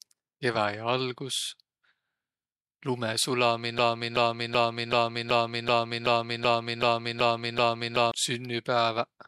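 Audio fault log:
3.78–8.12 s, broken-record loop: the speech stops moving forward and one 380 ms fragment plays 11 times back to back, exactly the same each time. The player, encoder or stream likely stalled and kept resending its last fragment, so the speech for that stretch is lost.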